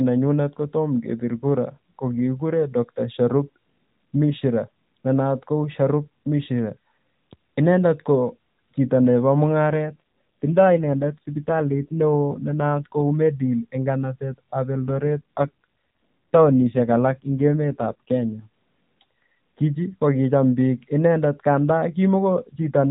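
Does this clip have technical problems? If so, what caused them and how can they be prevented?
Yes. There are two AMR rate drops, from 9.69 to 13.01 s and from 14.86 to 18.48 s. In both stretches the speech turns rougher, buzzier and more synthetic, then recovers. The roughness fits the AMR-NB coder stepping down from 12.2 to about 5.9 kbps, with the spare bits going to error protection on a weak radio link. On a spectrogram the band still stops at 4 kHz and the waveform shows no gap, but the harmonics look smeared and less sharply defined. Keeping the link margin high, with better coverage or a wideband or higher-rate codec mode, would prevent this.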